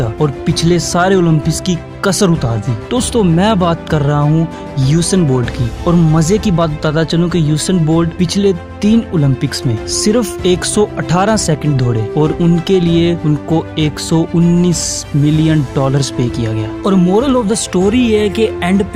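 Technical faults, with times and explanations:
No technical faults, with times or otherwise, are present to explain.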